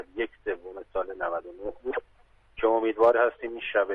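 No technical faults can be heard in this clip. Nothing breaks up, drops out or shifts at any point in the audio.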